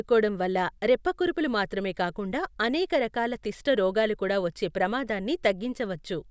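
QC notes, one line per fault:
Nothing to flag here, the speech comes through without a single fault worth noting.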